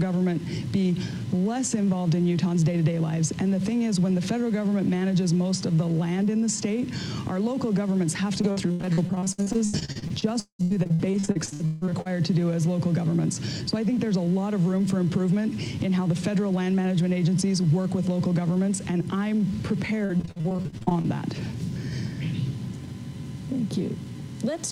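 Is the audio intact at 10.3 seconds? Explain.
No. From 8.41 to 12.07 s, repeated packet loss keeps patching holes by extending the last sound, up to 193 ms each, giving choppy, robotic audio rather than one single dropout.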